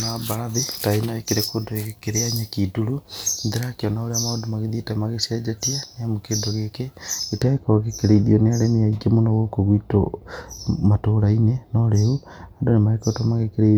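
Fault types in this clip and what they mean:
Pre-emphasis left on: The treble was lifted before recording or transmission, and the matching cut was never applied. From the start to about 7.42 s, the top end stands about 11 dB above the midrange at 10 kHz. The shape of the lift fits a J.17 curve. The speech sounds thin and bright, with harsh sibilance. The tilt ends just before "gĩkĩrĩithio nĩ arĩmi aingĩ", where the balance settles.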